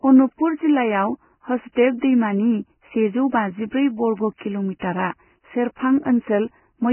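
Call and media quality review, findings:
Vorbis compression, whole clip: speech is band-limited with nothing above 3 kHz. Grainy, hissy texture and roughened tonal parts. Likely component is a Vorbis encoder at very low quality, with damage consistent with a bitrate near 10 kbps. The spectral floor keeps the rough shape. The treble residue is quantised so coarsely that detail turns into noise of similar energy.

Pre-echo, five events: 1.72–1.77 s (45 ms), 1.98–2.02 s (36 ms), both just before "दैमानि सेजौ बाजिब्रै"; 4.37–4.41 s (34 ms); 4.79–4.82 s (29 ms); 5.75–5.77 s (20 ms). A brief hiss precedes each sharp onset, and the attack sounds smeared. Same transform codec. Block quantisation noise sized for the loud attack spreads back into the quiet lead-in.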